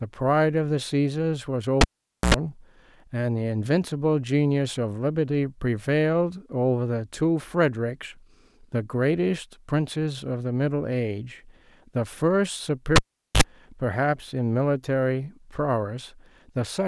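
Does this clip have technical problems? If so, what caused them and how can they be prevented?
Yes. At 1.81 to 2.34 s and 12.96 to 13.42 s the speech pops, drops to near silence for about 0.48 s and 0.42 s, buzzes briefly (84 ms at 60 Hz, then 50 ms at 50 Hz), and pops back. This is a cable pulled and plugged in while live, with mains hum leaking in as the bare tip touched first. Mute the channel before changing cables, and secure connectors so they can't be jostled loose.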